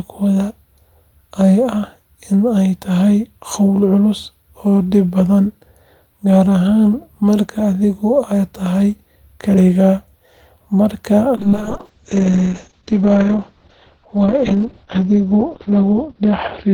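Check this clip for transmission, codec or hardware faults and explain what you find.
One fault is present: a call bitrate drop beginning at 11.38 s and lasting to the end of the clip. The call's bandwidth estimate fell, so the encoder was held to about 7 kbps instead of 32 kbps for roughly 4.9 s. At that rate Opus quantises far more coarsely and narrows its audio band from 20 kHz to 6 kHz, so the speech turns muffled and watery. On a spectrogram, energy above 6 kHz vanishes after 11.38 s, leaving a flat ceiling, with smeared, blotchy detail below it.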